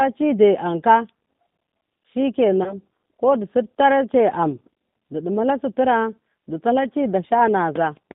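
Throughout the clip the speech carries the G.729 codec at 8 kbit/s. The encoder keeps only a vocal tract filter, a pitch predictor and a few pulses per subframe, so the voice comes out slightly rough and synthetic, and the damage is plainly audible. A spectrogram shows energy confined to about 150 Hz to 3.7 kHz, with a hard empty ceiling above and smeared, grainy harmonics inside the band.

From 2.64 to 2.75 s there is VoIP packet loss concealed by the speech codec, just before "ko du". About 20 ms of audio went missing, consistent with a single lost packet. The decoder filled the gap by repeating its last pitch and filter at falling gain, which produces a brief buzzy tone or coloured noise that fades, and the speech stays weakened until the predictor recovers. On the waveform this appears as a short stretch shrinking in amplitude. The spectrogram shows a frozen, unchanging spectrum instead of moving formants.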